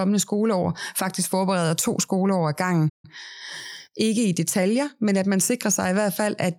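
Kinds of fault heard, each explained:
Playback stall: at 2.89 s the speech breaks off mid-flow and the output goes silent for 144 ms before carrying on. The player most likely ran short of data or had its audio thread blocked, leaving nothing to play until it recovered.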